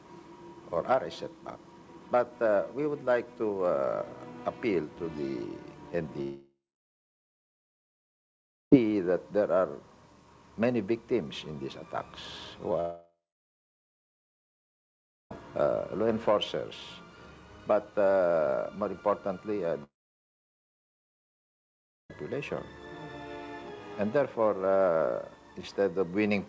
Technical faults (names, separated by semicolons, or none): long network dropout